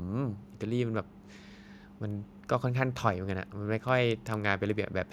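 No technical faults can be heard in the recording, and the signal stays intact throughout the speech.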